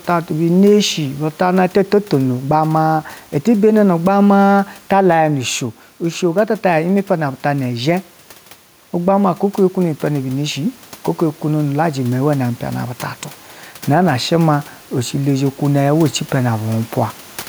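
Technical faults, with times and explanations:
Throughout: gain pumping. The room noise sits about 33 dB below the speech. The level swings by something like 10 dB. Loud and quiet passages sit unnaturally close together, so the speech sounds squashed. The likely cause is input gain set far too high, with a fast limiter clamping down on every peak and releasing in the gaps.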